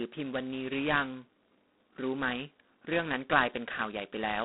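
From start to end the speech carries G.726 ADPCM damage at 16 kbit/s, its lowest rate, where each sample is coded as just two bits of difference from an adaptive prediction. That coarse step leaves a heavy, rasping hiss that swells and fades with the speech level. On a spectrogram the energy sits in a telephone band of 200 Hz to 3.5 kHz with nothing above 3.9 kHz, and grainy noise fills the gaps between harmonics. The waveform looks rough, with noise riding on the speech envelope and dropping in pauses.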